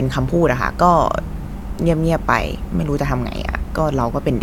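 No technical faults can be heard at any point in the speech, so there is nothing to set out in time order.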